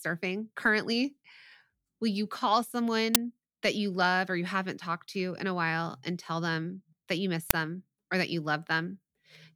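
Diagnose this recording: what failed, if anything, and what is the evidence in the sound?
The failure is at the driver or buffer stage: an uninitialised buffer was played out twice. At 3.15 s, between "you call" and "that you love or", a burst of loud digital noise lasts about 11 ms, which fits a 512-sample buffer. At 7.50 s, after "them that you miss", a second burst of about 5 ms fits a 256-sample buffer. Leftover memory was sent as samples before audio was written. A dropout would leave silence, not loud noise.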